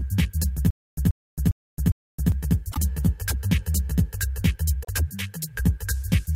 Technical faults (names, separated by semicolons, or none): channel delay (comb filtering); stutter with silent gaps; broken MP3 bit reservoir